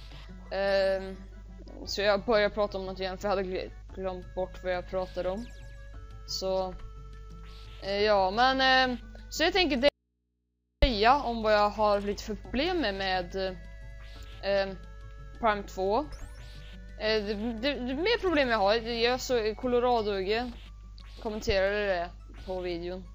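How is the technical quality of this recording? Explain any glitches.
There's one real glitch to flag. From 9.89 to 10.82 s there's an audio dropout to a faint residue: the sound cuts abruptly for about 0.94 s, leaving just low hum roughly 50 dB down. That's likely the signal lost while the path stayed live.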